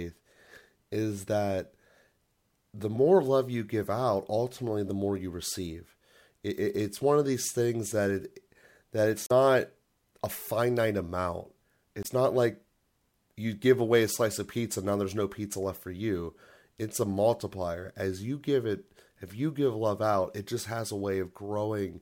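Two short glitches break the speech, from 9.26 to 9.32 s and from 12.01 to 12.07 s: damaged data in the compressed stream, where the decoder misreads corrupted frames and loses sync.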